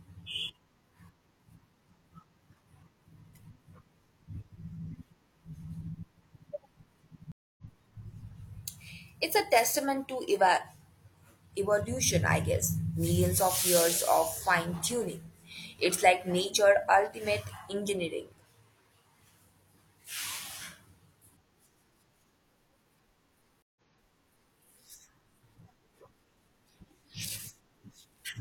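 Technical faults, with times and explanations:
7.32 to 7.63 s, stream reconnect. The sound cuts out for about 0.26 s. It resumes roughly 0.3 s further on, so a short stretch is skipped. The link dropped and a fresh decoder picked up the live stream.
23.62 to 24.57 s, stream reconnect. A 0.14 s silence follows. The sound then restarts 0.81 s earlier, repeating a stretch. The server resent a burst after reconnecting.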